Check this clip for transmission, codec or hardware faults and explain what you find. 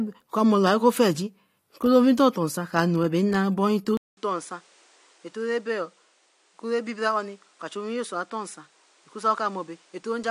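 One fault is present. Input switched to a poorer device at 3.97 s and lasting to the end: the recording likely moved to a different, narrower microphone path. After a 200 ms silence the speech returns duller, with nothing above 10.5 kHz, around 10 dB quieter, over new background noise roughly 30 dB below it.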